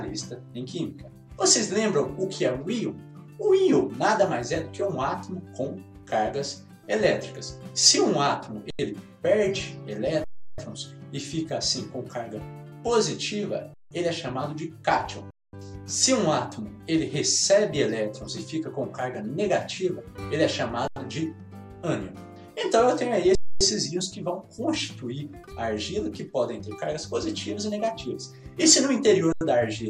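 The output buffer repeatedly ran dry, the converter holding its last value: underrun with held sample at 8.70, 10.24, 13.74, 15.31, 20.88, 23.35 and 29.32 s, lasting 85 to 341 ms. Sound freezes flat without clicking, then resumes softly where it stopped.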